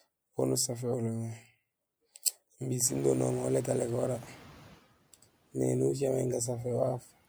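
Around 3 s the room noise jumps by about 24 dB, and from 2.84 to 4.8 s you hear the noise suppressor catching up. Its noise estimate lags, so the noise leaks through, then sinks by about 11 dB over roughly two seconds.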